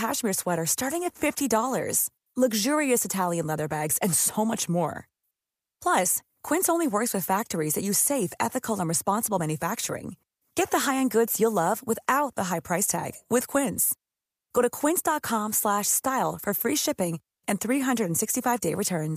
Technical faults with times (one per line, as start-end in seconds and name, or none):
none